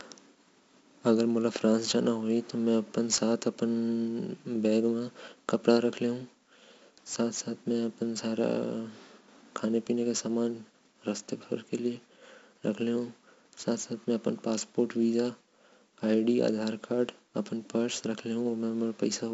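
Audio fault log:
throughout, 4-bit ADPCM compression: gritty hiss rides on every loud syllable and consonant attacks crunch where the adaptive step lags. Nothing above 7.7 kHz, fitting a 16 kHz rate at 64 kbps. Unlike a perceptual codec, there is no swirling; the noise simply follows level.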